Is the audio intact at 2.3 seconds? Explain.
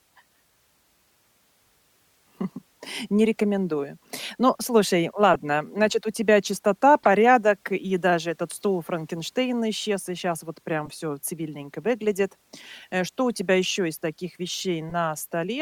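Yes, the speech at 2.3 seconds is intact, with no fault at that moment.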